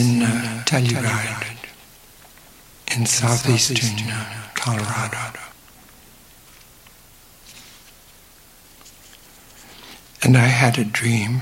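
From the opening until 5.52 s, a doubled audio track is heard: a second full-band copy trails about a fifth of a second behind, a few dB quieter. Unlike an echo or reverb, it carries no decay or room colour and cuts off abruptly. A slower second capture path is the likely cause.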